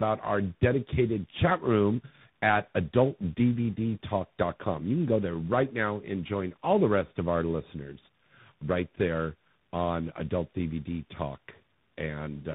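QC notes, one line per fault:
throughout, tandem speech coding: nothing above 3.8 kHz, with roughness, muffling and warble compounded beyond any single codec, fitting AMR-NB followed by repeated CVSD re-encoding.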